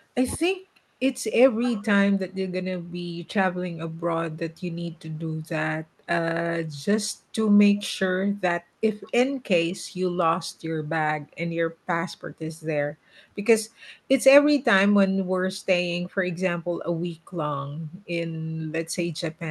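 A speech recording with two brief faults early on. From 0.35 to 0.45 s the talker's level falls sharply, by around 35 dB at its deepest, over roughly a tenth of a second. This is most likely speech suppressed in double talk, where an echo canceller mistakes the local voice for loudspeaker echo while both sides speak and turns it down. A network dropout would cut to silence or a glitch, but this is a steep gain dip. From 1.61 to 1.86 s a faint second copy of the voice trails the original by 202 ms, at about 15 dB below the main speech. That points to an echo leak, likely from a far-end loudspeaker whose canceller let part of the returned sound through. Room reverberation would smear continuously, whereas this is a discrete delayed repeat. The audio is band-limited near 12 kHz, which fits the Opus call path.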